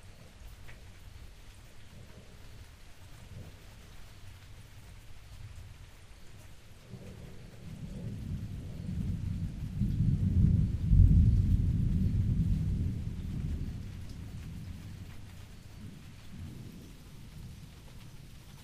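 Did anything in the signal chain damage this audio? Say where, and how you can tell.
Yes. From 16.47 s to 18.63 s, the last stretch of the clip, the sound suddenly plays at the wrong speed: it runs about 1.34 times fast, and everything jumps roughly five semitones higher at the same moment. Pitch and tempo shift together, which is the tell. It's most likely an editing or playback stage clocking that segment at the wrong rate, so the samples go out faster than they were captured.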